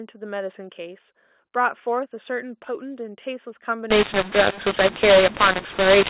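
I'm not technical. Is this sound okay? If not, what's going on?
No. From 3.90 s to the end, the speech turns harsh and gritty and the pauses fill with hiss. It's a mu-law and A-law mix-up: phone-coded audio was decoded with the wrong scale, scrambling loudness.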